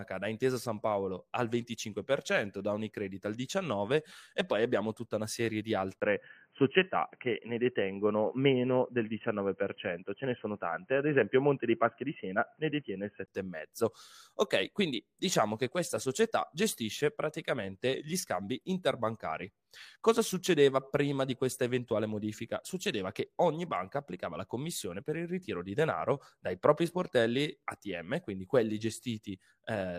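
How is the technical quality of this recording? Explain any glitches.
The recording has one clear glitch. From 6.0 to 13.3 s, right after "tutta una serie di", the speech turns dull and boxy, with nothing above 3.1 kHz. A 20 ms gap marks the change. The likely cause is the input switched to a poorer device with a narrower band. Faint new background noise appears, while loudness stays about the same. Clarity returns at 13.3 s.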